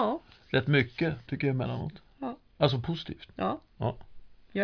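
Nothing in the speech stood out as a fault on listening.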